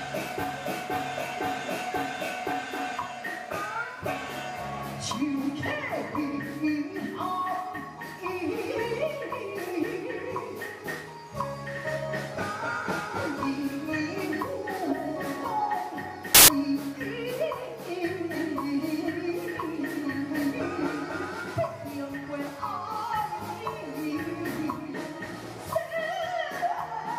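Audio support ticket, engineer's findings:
Burst of loud broadband noise, 16.35 to 16.48 s, about 0.14 s long. Samples built from the wrong bytes: decoder or reader misassembling sample bytes through a one-byte offset, swapped byte order or wrong alignment.

Mechanism: fast-changing low bits end up as the high part of each value, so the original waveform is replaced by loud noise for that window. Probable component: file parser or stream reader.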